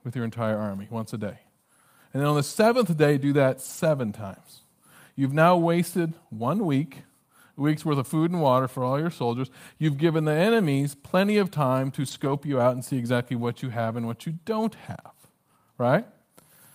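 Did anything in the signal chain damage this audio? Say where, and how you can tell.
Yes, at the network stage: lost packets rebuilt from error correction. After "then on the" (2.49–2.51 s), "day do that" (3.65–3.79 s) and "plenty of time to" (12.03–12.33 s), sound stays continuous but briefly turns rough and noisy. A low-bitrate copy filled in, so unlike concealment there's no gap or smeared repeat.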